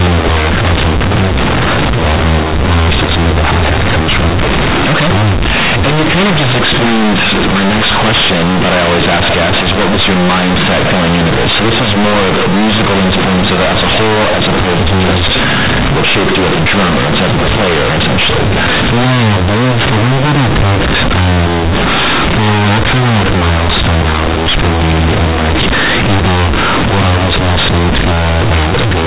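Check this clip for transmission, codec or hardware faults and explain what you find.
One fault runs through the whole recording. Throughout, the speech sounds harsh, very loud and buzzy, with heavy noise in the pauses. This is companded audio read as linear: A-law bytes are played as raw 8-bit samples without expansion, so quiet passages swing as hard as loud ones. The 4 kHz telephone band limit of the G.711 coding is still audible underneath.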